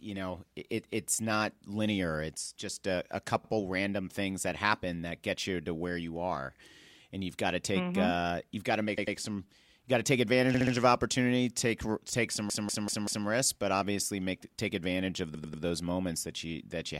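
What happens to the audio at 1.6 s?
At 1.6 s the speech plays through intact, with no dropout, click, distortion or other fault at that moment.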